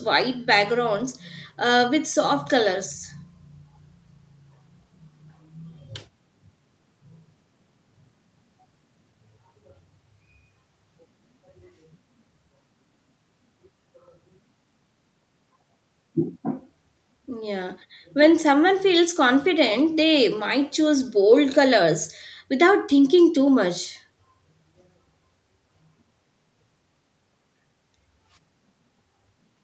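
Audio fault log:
No faults heard in this speech recording.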